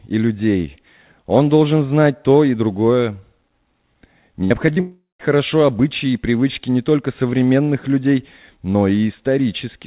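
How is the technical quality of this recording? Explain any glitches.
The recording is narrowband, with nothing above 4 kHz, which fits a G.711 mu-law call path at 64 kbps. A cluster of packet-loss faults falls between 4.44 and 5.21 s.

From 4.44 to 4.52 s there is a burst of packet loss. About 60 ms of sound never arrived, and the receiver carried the last sound forward while fading it, leaving a held, decaying buzz or hiss. It differs from the shorter events because the fill is long enough to be heard as a held sound before the sound jumps ahead.

Two short concealed packet losses follow, at 4.66 to 4.69 s and at 4.73 to 4.78 s. Each dropped about 20 ms, and the decoder patched the hole by extending the preceding pitch or noise and blending back in. Each is heard as a brief smear or wobble rather than a held tone, and a consonant may simply vanish.

From 4.80 to 5.21 s the sound breaks off for about 0.4 s, most likely because of a long network dropout. 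Roughly 390 ms is filled, and as the fading continuation dies out, the last 170 ms or so of that is silence before the sound resumes further on. That stretch of true silence is what separates it from the burst, whose fill never dies away completely.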